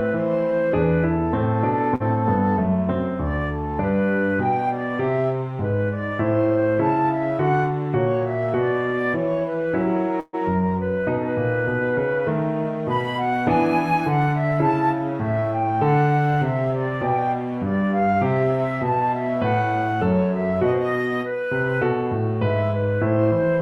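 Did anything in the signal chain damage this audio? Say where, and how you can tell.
Yes. Short stalls from a late packet at 1.95 s and 15.40 s, a network fault: the jitter buffer emptied, stretching the last sound by 47 ms and 18 ms. A spectrogram shows brief frozen, smeared bands.

A call audio freeze at 10.20–10.35 s: 133 ms of fading buzz ending in a brief silence, likely from network delay emptying the jitter buffer. The waveform shows a decaying, repetitive stretch, then flatline.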